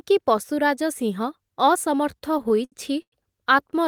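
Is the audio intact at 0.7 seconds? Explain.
Yes, at 0.7 seconds the speech runs intact, with no audible dropout, click, distortion or other fault at that moment.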